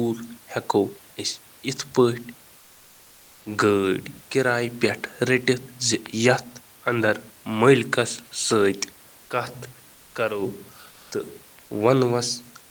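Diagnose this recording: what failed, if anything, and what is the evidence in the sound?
The codec stage is where it goes wrong, with comfort noise in place of the background between 10.91 and 11.11 s. For those 200 ms the room noise, which otherwise sits about 31 dB under the speech, gets swapped for a flat, detail-free hiss only about 1 dB off in level. That's likely discontinuous transmission, something like Opus DTX: the sender goes quiet during the pause and the receiver paints in synthetic noise until real audio resumes.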